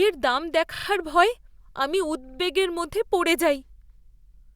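This speech clip has repeated frames twice. At 0.74 s, a 40 ms block plays three extra times, stuttering until 0.86 s. At 2.27 s, a 50 ms block repeats twice more, ending at 2.37 s. Resent compressed data likely caused this, adding about 220 ms overall.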